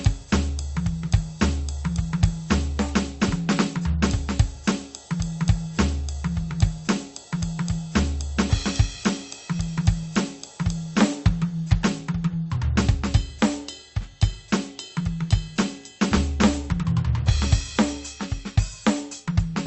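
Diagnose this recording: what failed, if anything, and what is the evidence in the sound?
Nothing has failed at any stage of this music recording. It has come through a WebRTC call path: the high end stops at 8 kHz, and the coding texture points to an Opus link running at around 32 kbps.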